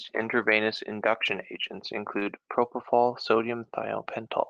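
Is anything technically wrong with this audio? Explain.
Yes. There is short concealed packet loss at 2.19 s and again at 2.23 s, two back-to-back gaps covering about 2.19 to 2.27 s. Each time, about 20 ms of speech arrived too late or not at all. The decoder covered each hole by extending the preceding sound, then blended back into the real signal. Here this is heard as a brief smear or wobble just under a tenth of a second long.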